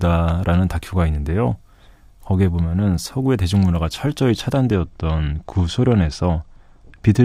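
Speech, with channel delay (comb filtering) from 4.76 s to the end. One channel arrives roughly a couple of samples late, a few hundredths of a millisecond, and summing to mono cancels the shared content around 10 kHz. The top end sounds dulled. A spectrogram would show a steady dark notch band near 10 kHz beginning at 4.76 s, while the waveform's outline would barely change.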